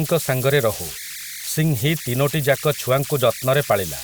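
A whistle near 2 kHz runs through the whole speech clip: converter idle tones, about 12 dB below the signal, from an undithered delta-sigma converter cycling through repeating bit patterns.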